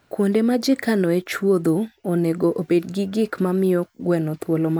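Nothing goes wrong anywhere in this bit of speech, so there's no fault to point to at any moment.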